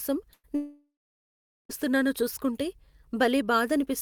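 At 0.33 s there's a burst of packet loss: about 100 ms goes missing, patched over by a short continuation of the last sound that fades out before the speech picks up again at 0.45 s. Then from 0.55 to 1.71 s the last sound is stretched out and fades, followed by roughly 0.8 s of silence, and over a second of speech never comes back, most likely a long network dropout.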